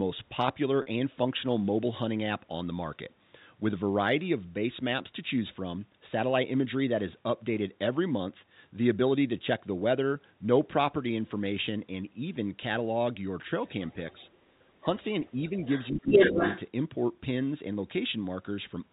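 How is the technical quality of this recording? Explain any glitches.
The recording has three kinds of fault on band-limited telephone speech, all heard as short events.

At 0.82 s, packet loss with pitch repetition bridges a 40 ms gap, which points to two lost packets. The receiver repeats the last pitch period, giving a brief held, buzzy tone.

The other side's voice leaks through at 13.65, 13.89 to 14.48, 15.22 to 15.49 and 15.65 to 16.61 s. It starts very faint, then becomes louder than the talker. This is likely incomplete echo cancellation of the loudspeaker signal.

Speech is suppressed in double talk at 14.81, 15.32 to 15.67 and 15.91 to 16.15 s. The talker dips by about 10, 5 and 20 dB, likely because the echo canceller attenuates both voices while they overlap.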